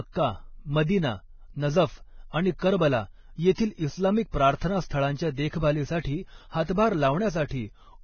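Speech with heavy, grainy, hissy coding damage throughout and nothing above 6.6 kHz, a flat spectrogram ceiling, likely Vorbis compression at a low rate, around 18 kbps. Pre-echo smears hiss ahead of attacks at 4.57–4.61 s (40 ms) and 6.73–6.77 s (46 ms), visible as noise preceding each onset.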